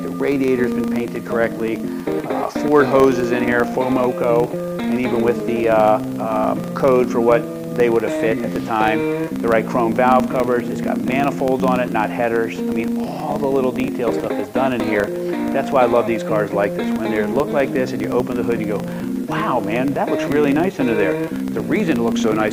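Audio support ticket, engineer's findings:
Filter restarted on every block: state reset at each 40 ms block boundary, so each block starts from silence. Result is a 25 Hz buzz throughout, tracking signal level.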